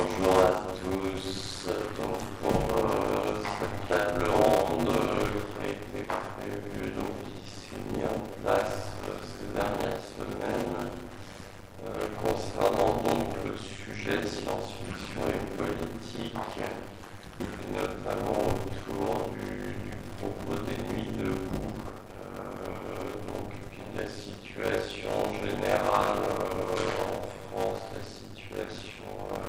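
A block size mismatch with zero padding runs through the whole clip. Each block arrives only partly filled, and the remainder is silence. That produces a steady 100 Hz buzz. The audio plays at about 0.53 times normal speed, at roughly normal pitch, which fits 256-sample writes into 480-sample reads.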